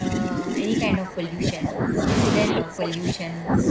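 It's a short speech clip, and the talker gets pushed down twice: from 0.0 to 2.04 s, then again from 2.53 s to the end, with the deepest dips around 20 dB. That pattern sounds like speech suppressed in double talk. Likely both ends were talking at once and the echo canceller couldn't tell this voice from loudspeaker echo, so it clamped everything. Separately, nothing sits above 8 kHz, which fits a wideband call codec.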